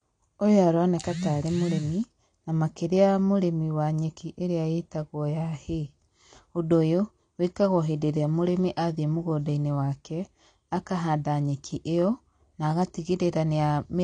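Throughout, the speech sounds dull and smeared, and the spectrogram stops flat at 9.8 kHz, likely from AAC compression at a low bitrate around 32 kbps.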